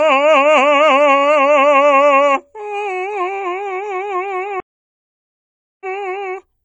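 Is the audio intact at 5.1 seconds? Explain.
No. A stream reconnect spans 4.60 to 5.86 s: the connection dropped, so the player stopped, reconnected and began decoding afresh mid-stream. The music falls silent for 1.20 s, then picks up roughly a third of a second further on, skipping that material.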